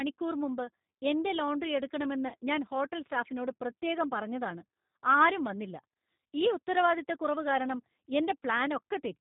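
A speech recording carried over a G.729 codec, probably the G.729A variant, with the band-limited, slightly synthetic quality that points to a low-rate 8 kbit/s link. The codec models each 10 ms frame with a vocal tract filter, a pitch predictor and a few pulses, so nothing above 4 kHz survives and the voice sounds plainly rough and synthetic throughout. Between 2.28 and 2.35 s, just before "ഞാൻ ഹോട്ടൽ സ്റ്റാഫിനോട് പ്രത്യേകം", there is VoIP packet loss concealed by the speech codec. The gap of about 40 ms fits four lost 10 ms frames. The decoder filled the hole by repeating its last pitch and filter settings at falling gain, which smears the sound into a brief fading buzzy tone or coloured noise. Because each frame builds on the one before, the voice stays weak or distorted for a short while after the packets resume.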